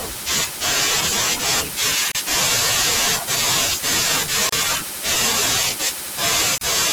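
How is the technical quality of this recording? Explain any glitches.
The speech has three brief silent holes. Each is a gap at a join of encoded pieces, at 2.12–2.15, 4.49–4.52 and 6.58–6.61 s, each about 32 ms. Separately encoded segments were spliced without trimming encoder delay and last-frame padding, leaving abrupt silences with smeared edges. Unlike a dropout, nothing is lost: the speech resumes exactly where it stopped.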